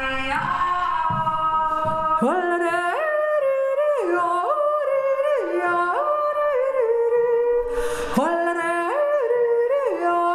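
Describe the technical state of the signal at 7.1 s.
At 7.1 s the signal is intact, with no dropout, distortion, glitch or other audible fault.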